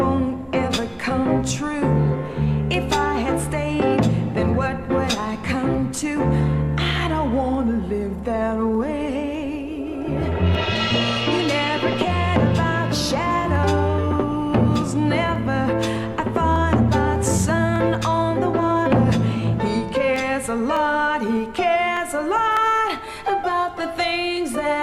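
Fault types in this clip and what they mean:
Clock drift buffer slips: a click recurs every 0.6 s from 0.33 s to 24.37 s, about forty in all. The likely cause is two devices on independent clocks differing by a few hundred ppm, so a buffer periodically drops or repeats a handful of samples.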